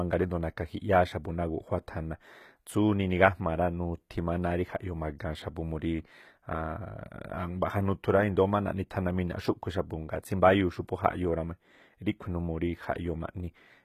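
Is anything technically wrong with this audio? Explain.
Yes. Throughout the speech there is plainly audible codec damage, most likely from HE-AAC compression at a very low bitrate, near 20 kbps. The treble is rebuilt from copied lower bands up to about 20.6 kHz, so s sounds come out gritty, metallic or lispy.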